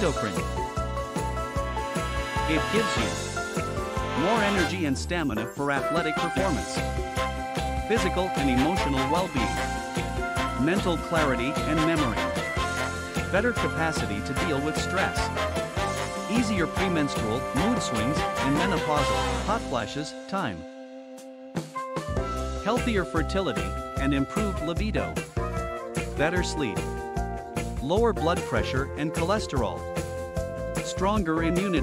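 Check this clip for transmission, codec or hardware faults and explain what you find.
One hardware fault runs throughout: sample clock jitter. A faint roughness rides on loud, bright passages, about 40 dB below the signal, because a clock wandering around a microsecond mistimes samples on steep waveform slopes.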